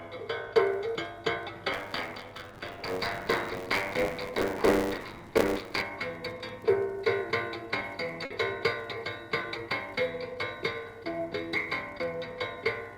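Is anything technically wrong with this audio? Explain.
Yes, three faults are audible.

From 1.72 to 5.82 s, a rattling buzz of about 94 Hz rides on the sound. This is buffer tearing: writer and reader cross inside every period, so roughly a third of each buffer replays audio about 30 ms old, which fits a 512-sample buffer.

At 8.25 to 8.31 s, the last sound is held and fades before the audio jumps ahead. This is a burst of packet loss: 50 ms never arrived and was bridged by continuing the previous sound.

At 9.42 to 9.44 s, a brief smear or wobble appears. This is short concealed packet loss: a 10 ms gap was filled by extending the preceding sound, then blended back into the real audio.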